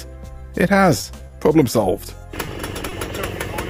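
From 0.97 to 1.43 s the audio turns choppy, with small pieces missing. This is repeated packet loss: about five separate gaps, the longest around 30 ms, arrive in quick succession. Each gap is bridged by extending the preceding sound, about 110 ms of patched audio in all, roughly a quarter of that stretch. A further 80 ms is simply absent, which explains both the choppy texture and the holes.

Two brief smears follow, at 2.45 to 2.49 s and 2.89 to 2.93 s, each a momentary wobble in the sound. These are short concealed packet losses. Each time, about 20 ms of data failed to arrive in time and roughly 20 ms was filled by continuing the last sound before it blended back into the real signal.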